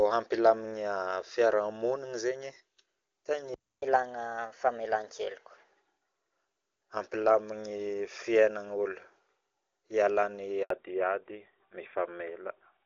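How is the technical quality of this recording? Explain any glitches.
Four faults break up this speech recording.

At 3.54 s the player likely ran out of data, a playback stall, so the sound cuts out for 280 ms before resuming at 3.82 s.

Catch-up at higher speed follows as the player resamples its backlog to 1.15 times speed, lifting pitch about two semitones until 5.69 s.

At 10.62 s a handover gap occurs. The call switches networks and no frames arrive, so the sound drops away into 80 ms of silence.

Fallback to narrowband follows at 10.70 s. The wideband HD Voice link, which sounds clear at a high rate up to this point, gives way to an older narrowband codec. Nothing above 4 kHz survives to the end, leaving the voice duller and rougher.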